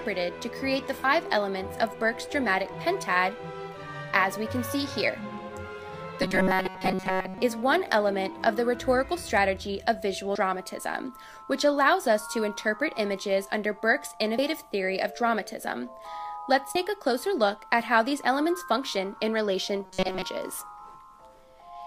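At 1.04 s, whole blocks of the compressed stream never reach the output, either missing or rejected by the decoder as damaged. This is the fault of compressed frames skipped. With frames of 32 ms, roughly two are lost, so the audio leaps ahead by about 70 ms.

From 6.22 to 7.38 s, fresh audio likely arrives too seldom, and the playback side covers the gaps by looping the last sliver it holds. Most of the real material, around two thirds or more, is replaced by repeats. The result is robotic sound from repeated short buffers. The loop imposes a steady 188 Hz pitch, which fits a buffer of about 5.3 ms, so the sound becomes a hard metallic drone that only loosely tracks the original.

The same frame skipping returns at 10.35 s, this time about three frames, close to 100 ms of audio gone. It recurs at 14.38 s and 16.75 s, each losing about two frames, near 70 ms.

From 19.84 to 20.22 s the repeating-buffer drone comes back, with the same rigid 188 Hz buzz overlaying the sound.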